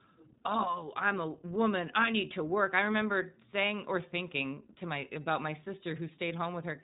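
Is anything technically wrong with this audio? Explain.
Yes. The speech runs through the iLBC codec for its whole length, with plainly audible damage. iLBC is a narrowband codec that codes each frame's excitation on its own, which here points to 20 ms frames at a rate that fits the 15.2 kbps mode. The result is rough, slightly synthetic speech. A spectrogram shows a hard ceiling with no energy above 3.8 kHz.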